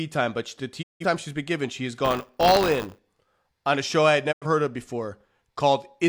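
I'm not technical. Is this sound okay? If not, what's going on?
No. There are two kinds of problems.

The first is a digital broadcast dropout. At 0.81 s the speech quickly fades out and goes silent. It returns at 1.05 s. The same thing happens again from 4.31 to 4.47 s. The receiver stopped getting clean data, so it muted itself until good data arrived. Whatever was said during those gaps is gone. The first gap fits about four lost chunks of data, the second about two.

The second is buffer tearing. From 2.04 to 2.99 s the speech takes on a robotic buzz, about 100 times a second. Sound is handed to the playback hardware in small batches. Here the hand-off has slipped out of step. A small slice of each batch is replayed from a split second earlier, with an abrupt join on each side. Those repeated joins make the rattle.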